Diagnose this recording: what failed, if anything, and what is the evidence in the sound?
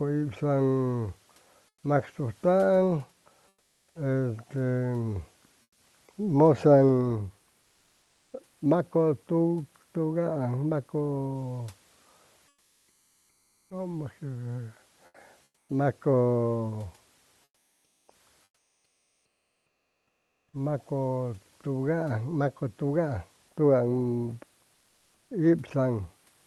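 Comfort noise in place of the background at the codec stage. At 1.68, 3.48, 5.62, 7.62, 12.48, 15.06, 17.44 and 24.74 s, pauses turn to featureless hiss, up to about 8 dB quieter. The likely cause is Opus discontinuous transmission.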